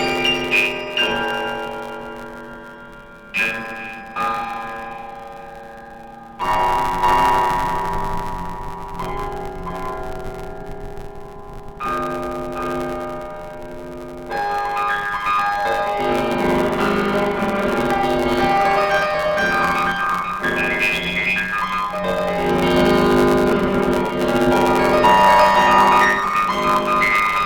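Throughout the music, planar audio read as interleaved chops each 10 ms block into a left and a right half played at double speed, which creates a robotic 100 Hz buzz. Unlike a sample-rate mismatch, the tempo stays correct and there is no clean octave jump.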